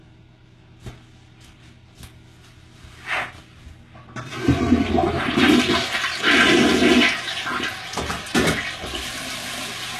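A recording of sounds, and the whole thing carries plainly audible HE-AAC compression damage. Nothing survives above 12.3 kHz, and the treble that's there sounds rebuilt, gritty and metallic rather than real, likely from spectral band replication at a very low bitrate around 16 kbps.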